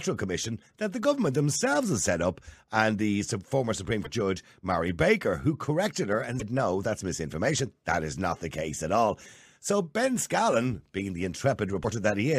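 Speech with short glitches at 4.04–4.07, 6.39–6.42 and 11.82–11.85 s, showing as brief broadband smears or gaps on a spectrogram, likely a broken MP3 bit reservoir after cut frames.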